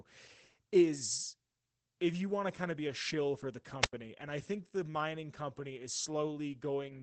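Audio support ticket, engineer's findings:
Muffled, slightly hoarse, faintly robotic speech across the whole clip. Opus voice compression at 12 kbps, SILK wideband mode, 20 ms frames: linear-prediction coding with a coarsely quantised excitation. Codec damage plainly audible. Spectrogram: energy stops near 21.2 kHz, and harmonics look smeared and blocky frame to frame.

Wireless microphone squelch dropout at 3.81–3.93 s, right after "a shill for the". Brief hiss swell, then about 90 ms of near silence, then speech returns. Probable component: the analogue FM receiver, whose squelch muted the output when the RF signal faded. Waveform shows a flat gap. Spectrogram shows a broadband noise smear, a blank column, then speech resuming.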